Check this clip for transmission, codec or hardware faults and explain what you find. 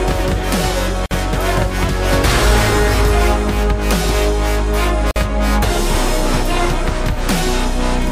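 There are two short dropouts, each a gap at a join of encoded pieces. At 1.06 to 1.11 s and again at 5.11 to 5.16 s, four seconds apart, the sound halts for about 50 ms with smeared edges, then resumes exactly where it stopped. Separately encoded segments were joined untrimmed, so each encoder's start-up delay and final-frame padding remain as silence.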